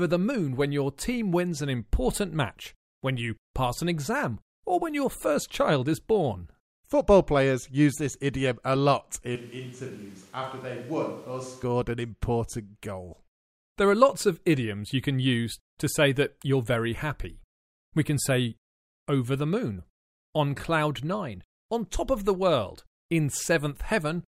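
Switch to a distant microphone, 9.36 to 11.63 s: after "this idiom a lot" the speech abruptly turns roomy, hollow and bass-thin, about 10 dB quieter, with room noise some 25 dB below it, likely because the close microphone dropped out. It snaps back before "an important goal".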